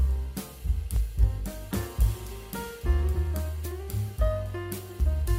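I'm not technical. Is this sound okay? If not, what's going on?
No. From about 0.96 s to 5.0 s there's a click roughly every 1.35 seconds, about four in all. These are clock drift buffer slips, likely from two devices whose clocks disagree slightly, so about 70 samples get dropped or repeated at regular intervals.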